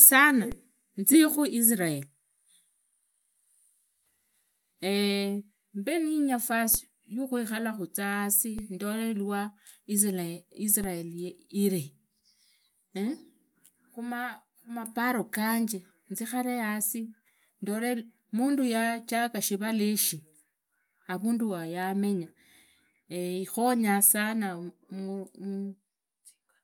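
A speech recording with four low thumps, at 0.52 s (just before "tsiikhuu israel"), 6.75 s, 8.59 s (between "alakho tsia yasi" and "ndolee iwaa israel") and 10.84 s (after "yasi ndolee iwaa israel"), while the speech carries on unaffected. Each is a DC step: the waveform's zero line jumps suddenly, by about -24 dBFS at the first two and about -27 dBFS at the last two, and then drains away as a 20 Hz high-pass filter pulls the offset back to zero.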